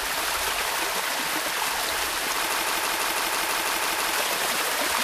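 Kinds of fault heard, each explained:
Broken-record loop: at 2.53 s the sound snags on a 0.16 s snippet and repeats it exactly, ten times back to back, until 4.13 s, so whatever belonged there is gone. Likely a stalled player or stream resending its last chunk.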